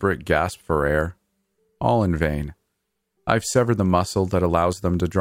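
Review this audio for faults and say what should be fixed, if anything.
Nothing in this recording needs fixing. The speech has no audible technical problem, so no change is called for.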